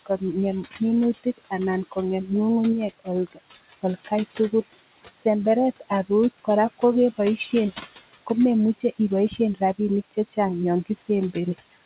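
Noise suppressor artifacts run throughout. The suppressor lowers the room noise by about 15 dB between words, so the leftover noise pumps under the speech.

Speech cut by the noise suppressor occurs at 0.06–2.3 s, 2.99–5.26 s, 5.8–7.53 s and from 8.26 s to the end. The suppressor mistakes soft consonants and word endings for noise and drops them by up to about 19, 21, 14 and 20 dB respectively, over a few hundred milliseconds within each of the first three spans, so they sound swallowed. The room noise sits about 13 dB below the speech, and the call band stops at 4 kHz.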